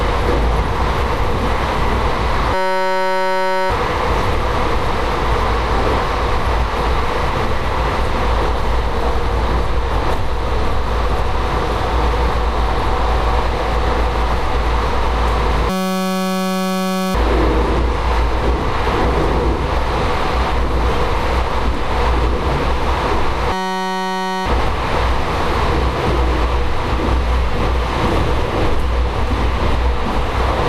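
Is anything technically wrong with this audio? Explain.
Yes, there are three system hang loops: 2.54 to 3.70 s, 15.70 to 17.15 s, and 23.53 to 24.46 s. Each time, the system stalls while the sound hardware keeps replaying the same tiny slice of its ring buffer, about 5.33 ms, which fits a 256-sample buffer. Repeated well over a hundred times, that slice turns into a steady 188 Hz buzz. Then the sound resumes right where it left off, with essentially nothing missing.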